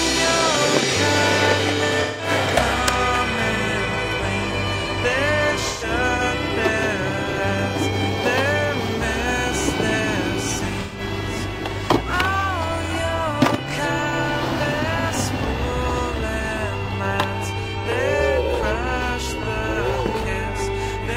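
AAC frame loss with concealment breaks up the sound three times: at 2.01 to 2.29 s, across 5.68 to 6.22 s, where the gaps are scattered and the longest run is around 150 ms, and at 10.80 to 11.00 s. The first two each lose about 171 ms, which fits four 43 ms frames, and the third loses 128 ms. The decoder rebuilds each gap from the last good spectrum with scrambled phase, so these stretches sound smeared, noisy and phasey. On a spectrogram they appear as blurred blocks of frozen, stretched energy without fine detail. The waveform envelope goes flat and grainy.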